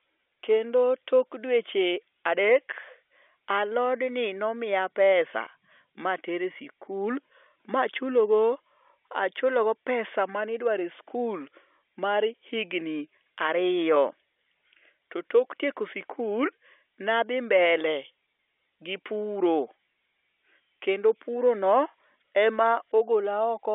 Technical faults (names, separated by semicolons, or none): none